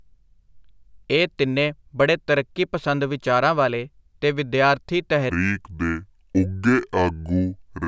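Speech runs at its natural speed and pitch until 5.30 s. From there to the end at 7.87 s, it suffers from a wrong sample rate. The audio slows to about two thirds of its proper speed. Pitch drops by about 7 semitones at the same time, so the voice turns low and dragging. Speed and pitch fall together by one fixed ratio. That fits audio recorded at 24 kHz but played back at 16 kHz without conversion.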